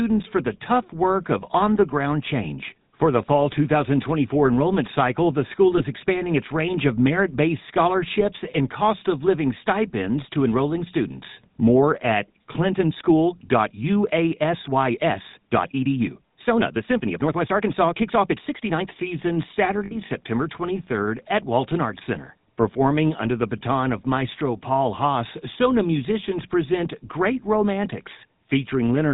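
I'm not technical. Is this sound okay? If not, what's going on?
No. The recording has gone through the GSM full-rate codec, the old mobile-phone speech coder, for its whole length. It rebuilds the voice from a simple model of the throat and mouth, driven by a sparse train of pulses, and discards everything above 4 kHz. That gives the speech a buzzy, gravelly edge and a dull, boxed-in sound with no crispness on consonants. The damage is plainly audible throughout.

There are two places with lost GSM frames, where pieces of the phone signal failed to arrive and the decoder held on to the last good piece instead. At 5.78 to 5.82 s, between "enrollment cycle the school" and "expanding its range of", a 20 ms gap is filled this way, leaving a brief rough blip. At 19.85 to 19.96 s a 60 ms gap produces a longer metallic ring where the sound hangs for a moment before the speech resumes.

From 12.67 to 18.97 s there is a time-stretched section. 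The speech suddenly runs about 1.44 times faster while its pitch stays the same, so the voice doesn't go squeaky but the pace jumps and sounds rushed, as small slices of sound are skipped to make it fit. This is likely the result of editing software squeezing that stretch to fit a set length.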